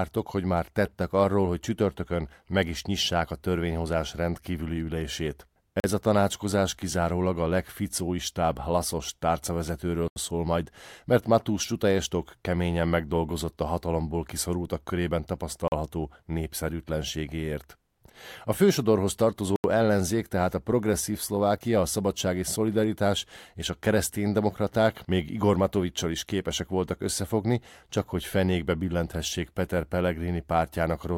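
Short holes break the speech at 5.8 s and 15.68 s, each lasting 40 ms, and at 10.08 s and 19.56 s, each lasting 80 ms. Each is a block of digital silence: the output drops abruptly to silence and returns without any fade. Such blocks arise when samples are zeroed, typically because the output buffer wasn't filled in time.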